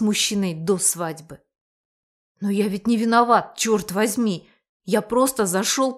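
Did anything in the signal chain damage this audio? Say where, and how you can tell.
No, nothing in the signal chain stood out as damaging this audio on listening.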